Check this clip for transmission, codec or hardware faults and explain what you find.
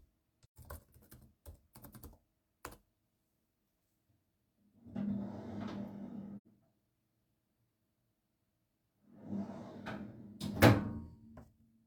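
There are two dropouts, both AAC frame loss with muting. At 0.42–0.58 s and 6.37–6.47 s, the decoder zeroed the missing frames' spectrum. Overlapping windows fade the sound out and back, leaving soft gaps of about 0.13 s and 0.09 s.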